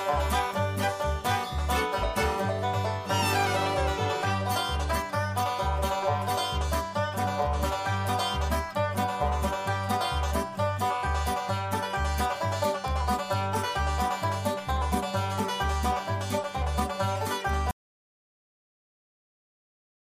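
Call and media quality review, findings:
Audio dropout to silence at 17.71 s, running to the end of the clip: the sound cuts off mid-flow into dead silence, no room tone. Likely input lost (device disconnect, failed link or mute) while the recorder kept writing silence.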